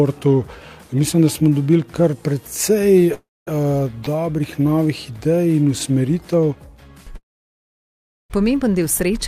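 At 3.14 to 3.49 s there is a call audio freeze, likely from packets delayed in transit draining the jitter buffer. The last sound is continued and fades, leaving about 240 ms of silence, and then the audio resumes where it stopped. This inserts a 328 ms gap with nothing lost.

From 4.05 to 4.08 s a short stall from a late packet holds the preceding sound for 18 ms until the packet arrives. Playback then continues from the same point, so nothing is missing.

A second call audio freeze runs from 7.17 to 8.32 s, likely caused by packets held up in transit. The continued sound fades into about 1.09 s of silence before the audio picks up where it left off, adding 1.13 s of delay without dropping any material.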